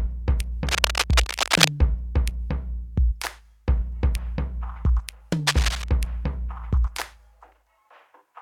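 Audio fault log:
0.67–1.69 s: cable scratch noise, likely from a worn cable, connector or control being moved so its contact resistance jumps about. Dense, uneven bursts of crackle and rustle sit over the music for about a second, roughly as loud as the music itself.
5.47–5.89 s: cable scratch noise again, a shorter burst of the same scraping texture lasting under half a second, somewhat quieter and a few decibels below the music.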